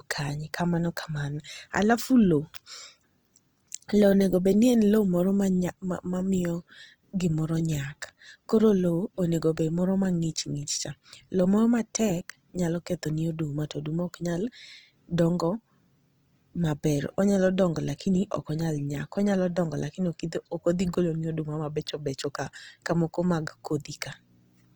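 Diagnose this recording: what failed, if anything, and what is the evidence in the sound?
The codec stage is the weak link here: the speech has a grainy, plainly rough texture across the whole clip, with band energy held but fine detail filled in noisily. That points to Opus compression, likely CELT mode at around 24 kbps, still reaching to about 20.2 kHz.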